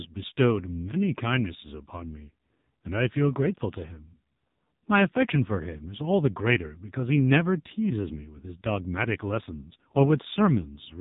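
Right through the speech there's the AMR narrowband mobile codec at heavy damage: nothing above 4 kHz, and the sound points to its low 5.9 kbps mode, so voices come out buzzy and synthetic.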